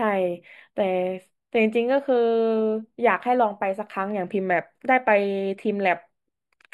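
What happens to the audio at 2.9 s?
At 2.9 s the speech is hollow and slightly dull, and this holds across the whole clip. The cause is channel delay (comb filtering). One channel arrives a few samples late, well under a millisecond. Summing to mono then carves fixed notches, the first near 7 kHz.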